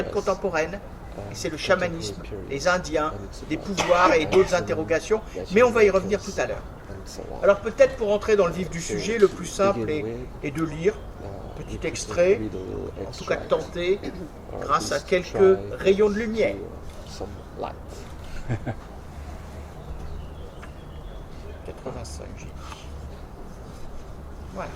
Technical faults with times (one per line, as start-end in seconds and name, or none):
4.01-4.04 repeated frames
18.93 repeated frames